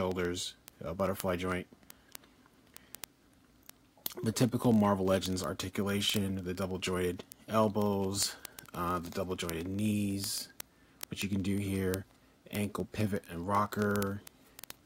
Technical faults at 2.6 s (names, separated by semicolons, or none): word clock ticks